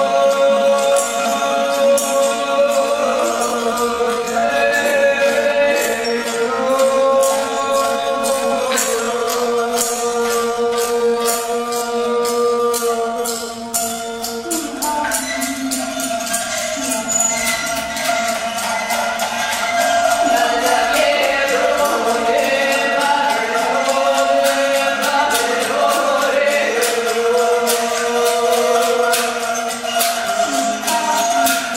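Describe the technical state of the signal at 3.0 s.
At 3.0 s the signal sits inside a time-stretched section running from 0.0 to 14.22 s, playing at 0.58 times normal pace. The pitch is unchanged, so the slowing sounds dragging, likely from software repeating short fragments to lengthen the passage.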